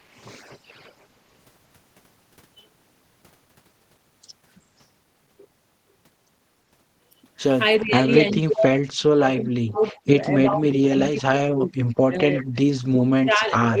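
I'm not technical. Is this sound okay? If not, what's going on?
No. In the first fraction of a second, 0 to 0.21 s, there is a faint echo leak: a delayed copy of the voice arriving about 0.37 s late, very quiet. This is likely a loudspeaker on the other end whose echo canceller let some sound slip back.

From 7.8 s to the end the voice is speech suppressed in double talk. It dips at 7.8–8.02 s, 8.19–8.93 s, 9.09–12.86 s and 13.06–13.8 s. The first dip is mild, the later ones nearly silence it. Both sides were likely talking at once, and the echo canceller turned this voice down.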